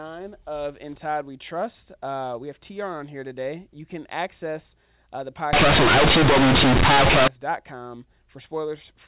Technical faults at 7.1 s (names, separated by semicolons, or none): companded audio read as linear